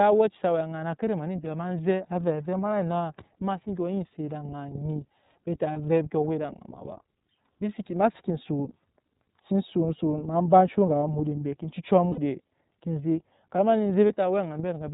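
iLBC codec coding runs through the whole speech clip. It cuts everything above 4 kHz and gives a plainly rough, synthetic edge, which fits the 13.33 kbps mode with 30 ms frames. Lost iLBC frames occur at 5.72–5.77 s, 12.11–12.19 s and 14.07–14.12 s, right after "ma lo". The decoder fills each gap with a short buzzy, held vowel-like sound built from the last pitch cycle and noise, lasting about 30, 60 and 30 ms, consistent with one or two dropped frames. The speech recovers almost immediately afterwards.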